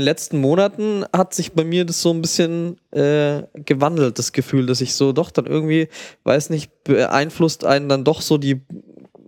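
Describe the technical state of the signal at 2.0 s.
At 2.0 s the speech signal is intact, with no audible fault at that moment.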